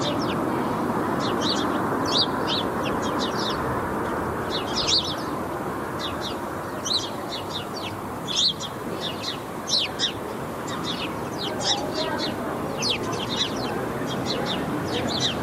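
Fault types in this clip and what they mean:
No faults are audible: the sound runs without dropouts, glitches or level problems at any point.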